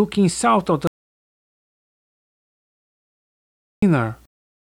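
At 0.87 s the sound stops dead and does not return until 3.82 s, an audio dropout to silence lasting about 2.95 s. The gap is silent with no room tone or hiss, which separates it from a noise gate or a fade, where some floor or taper would remain. The input was likely lost through a disconnected device or failed link while recording carried on, so whatever occurred in that span is missing.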